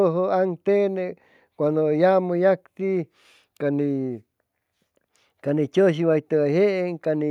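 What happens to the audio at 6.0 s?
Nothing goes wrong at 6.0 s; the speech plays through that moment intact, with no dropout, click, distortion or other fault.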